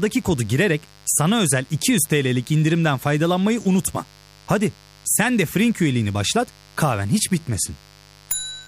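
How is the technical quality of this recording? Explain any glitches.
A steady, raspy buzz sits underneath the speech from start to finish, well below the voice at roughly 30 dB down but always present. This is mains buzz on a 50 Hz supply. Sharp switching spikes, such as those from a dimmer, a rectifier or a missing shield, leak into the signal twice every mains cycle. Their harmonics of 50 Hz stretch up to several kilohertz, which gives the buzz its gritty edge rather than a smooth low hum.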